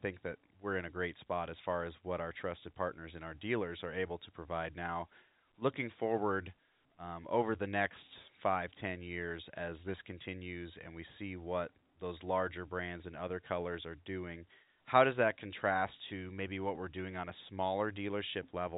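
No technical faults are present.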